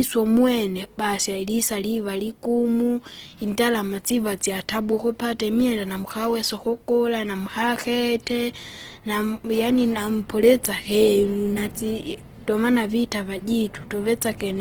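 A speech recording with plainly audible Opus compression throughout, likely from music-mode encoding at a low rate near 16 kbps: grainy, rough tones, noise-filled bands on a spectrogram, and content reaching about 20.2 kHz.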